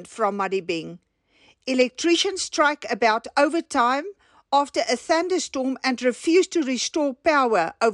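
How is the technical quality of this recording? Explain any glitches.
Nothing stood out as a technical problem on listening to this recording.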